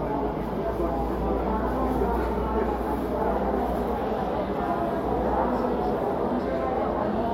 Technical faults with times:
1.43-7.34 mains hum

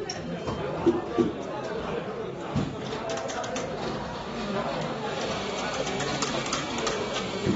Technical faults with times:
0.00-7.55 AAC compression

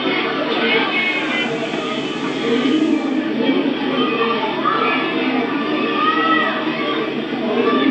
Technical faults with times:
0.82-3.35 digital radio blending to analogue

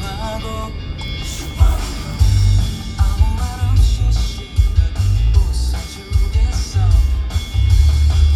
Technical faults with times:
none

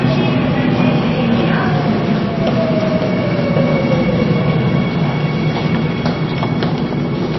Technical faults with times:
0.00-7.39 MP3 compression

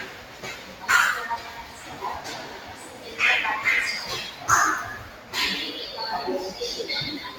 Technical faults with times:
0.00-7.39 noise suppressor applied to music or sounds
0.04-0.84 sound cut by the noise suppressor
1.38-3.13 sound cut by the noise suppressor
5.03-5.33 sound cut by the noise suppressor

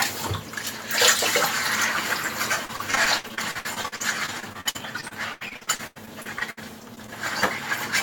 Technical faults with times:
2.65-6.59 repeated packet loss (robotic sound)
6.95-7.11 short concealed packet loss

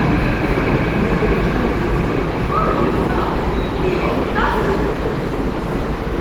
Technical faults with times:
0.00-6.20 Opus compression

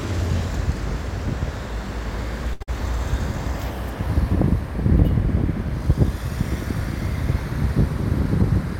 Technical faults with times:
2.53-2.63 short stall from a late packet
2.63-2.69 burst of packet loss

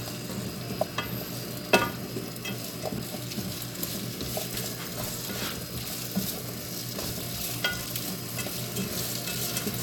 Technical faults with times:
0.81 damaged data in a compressed stream
4.53 damaged data in a compressed stream
7.08 damaged data in a compressed stream

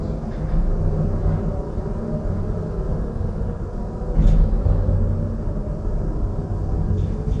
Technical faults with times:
0.00-7.40 AAC compression

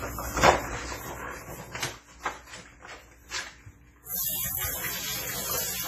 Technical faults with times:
0.00-5.87 WMA compression
0.68-1.72 zipper noise

